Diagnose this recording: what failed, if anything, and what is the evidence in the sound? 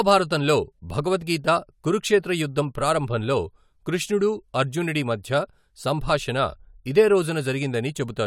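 Nothing in the speech signal points to a failure at any stage of the chain, from the wiring and conversion through to storage and playback.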